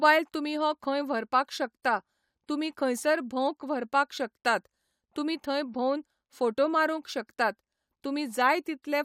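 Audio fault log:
Nothing stood out on listening to this speech recording.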